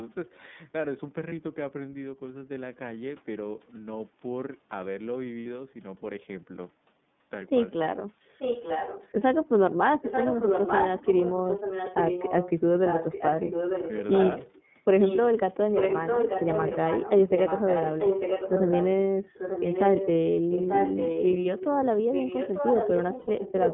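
Throughout, the speech carries the iLBC codec: a narrowband line from about 150 Hz to 3.6 kHz, clear but slightly rough and synthetic. The band limit separates it from a wideband codec, and the roughness sits evenly on every syllable rather than coming and going.

Lost iLBC frames appear at 1.28 s (30 ms), 5.40 s (60 ms) and 23.19 s (90 ms). The decoder repeats the last pitch cycle with added noise, so each gap becomes a brief held, buzzy vowel. Unlike a dropout, there is no silence, and the voice is clean again immediately afterwards.

An echo leak runs from 8.31 to 9.08 s, 10.02 to 14.75 s, 15.0 to 15.3 s, 15.75 to 18.87 s, 19.34 to 21.67 s, and from 22.12 s to the end. A delayed copy of the voice trails 891 ms behind, only a little quieter than the speech itself. The likely cause is a loudspeaker-side echo canceller that failed to remove its pickup. The long, fixed delay separates it from room reverberation.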